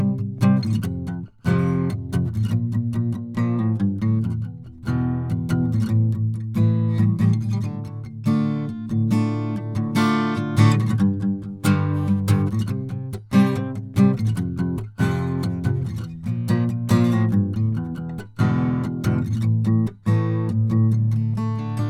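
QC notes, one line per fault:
Nothing in this music stood out as a problem on listening.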